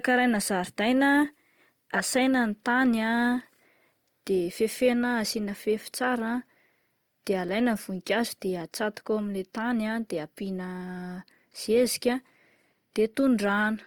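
Throughout, the speech sounds grainy and rough with a noisy texture, though it stays full-band up to about 20.2 kHz; this is likely Opus compression at a low bitrate near 24 kbps.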